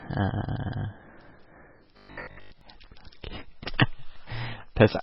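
Throughout, the speech is band-limited and sounds watery and swirly, likely heavy MP3 compression at a very low bitrate around 16 kbps. From 1.97 to 2.61 s, a rigid 50 Hz metallic buzz follows the speech only roughly: robotic sound, likely from repeated short buffers, fitting a 20 ms buffer looped over most of the span.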